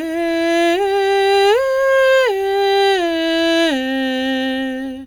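A music clip with no audible technical faults.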